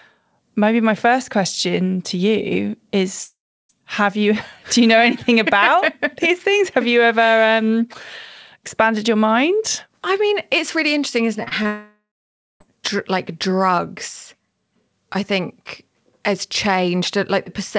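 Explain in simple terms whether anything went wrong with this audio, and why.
Yes, the connection broke up twice. At 3.24 s a long network dropout, likely from lost packets, leaves about half a second of fading buzz and then quiet before the speech resumes.

Around 11.43 to 11.66 s there are three bits of short concealed packet loss: the receiver papers over missing slivers, so the speech briefly smears or wobbles.

Right after, from 11.66 to 12.62 s, a second long network dropout swallows nearly a second of audio, with a fading buzz and then about half a second of silence.

Everything sounds a little dull because this call codec cuts off the sound above 8 kHz.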